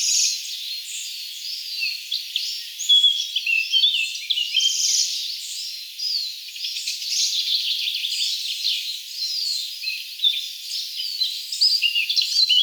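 Gain pumping runs through the whole clip: the level ducks by around 5 dB under each loud sound, squashing loud and soft parts together. The likely cause is input gain set far too high, with a fast limiter clamping down on every peak.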